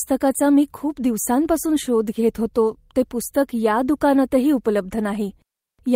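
No technical faults can be heard in this recording.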